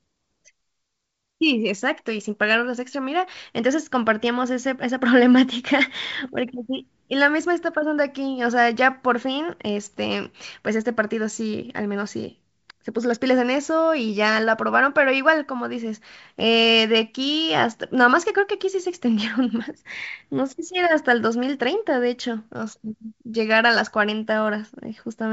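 No technical faults are audible.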